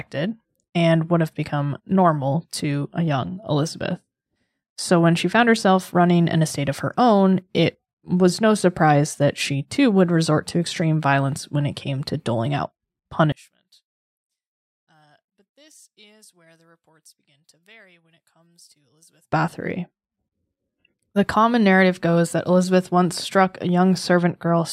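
From 13.32 to 19.32 s, the likely cause is one channel inverted: one stereo channel's polarity is reversed, so the content common to both cancels when they are summed to mono. The speech falls by about 34 dB, leaving only a faint residue.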